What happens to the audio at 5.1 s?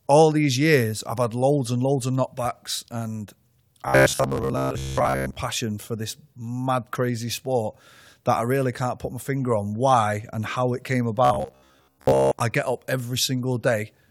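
At 5.1 s the speech is in robotic sound from repeated short buffers, from 3.88 to 5.37 s, between "loads of knockbacks and" and "passion for this mad". The likely cause is a starved audio path looping a roughly 15 ms slice over most of the span, giving a rigid, metallic 66.7 Hz buzz. On a waveform this shows as identical repeating cycles; on a spectrogram, as even horizontal stripes spaced 66.7 Hz apart.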